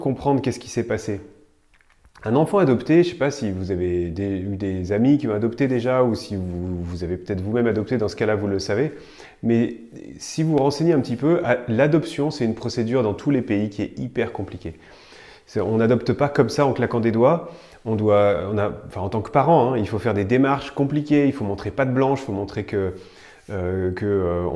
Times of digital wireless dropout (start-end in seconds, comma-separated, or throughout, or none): none